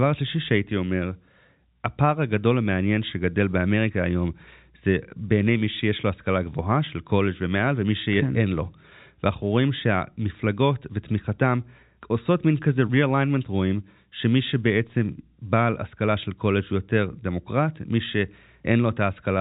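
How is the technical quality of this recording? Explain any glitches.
No audible glitches or faults.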